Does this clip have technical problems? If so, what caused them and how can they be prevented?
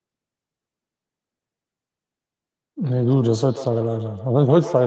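Yes. From 2.95 s to the end, the speech comes back at roughly 150 ms intervals, thinner and more ringing, peaking about 13 dB below the speech. This is feedback echo between two devices. One device's loudspeaker replays the call, and the other microphone recaptures it. To prevent it, join from only one device per room or use headphones.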